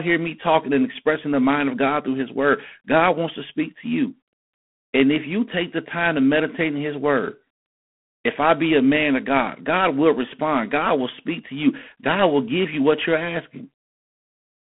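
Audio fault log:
Throughout: G.726 ADPCM coding at a rate that fits 24 kbit/s leaves the speech with a harsh, rasping hiss that rises and falls with its level. Each sample carries only a few bits of difference from an adaptive prediction, so quantisation noise rides on the signal. The spectrogram shows a telephone band of about 150 Hz to 3.4 kHz, with nothing above 3.8 kHz. The waveform looks grainy, its noise scaling with loudness.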